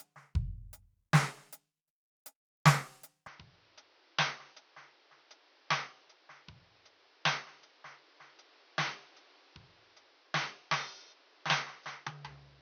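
At 3.27 s the recording system likely switched its input to a poorer device, and the music carries that change through to the end. From that point nothing reaches above 6.3 kHz, so the top end vanishes and the sound turns dull and boxy. The level drops by around 10 dB, and a new background noise appears, roughly 30 dB below the music. The switch is abrupt, with no gap of silence at the changeover.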